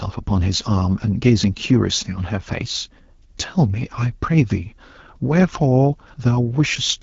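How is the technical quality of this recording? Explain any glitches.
The recording is held back by one fault that runs through the whole speech clip: AMR wideband (HD Voice) codec damage, and it is plainly audible. The coding models the voice as pulses driving a vocal tract filter up to 6.4 kHz, then pads the band above that with shaped noise, and nothing exists past about 7.5 kHz. The roughness and raspy grain point to one of the codec's two lowest rates, near 8.85 kbit/s. The wider bandwidth is what separates it from muffled narrowband phone audio.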